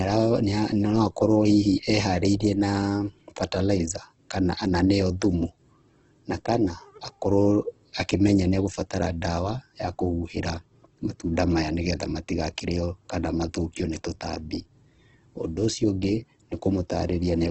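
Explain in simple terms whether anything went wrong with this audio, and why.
Heavy Opus compression is the likely cause, from start to finish. Nothing above 8.2 kHz survives, so the speech sounds dull. Squeezed detail turns grainy and rough.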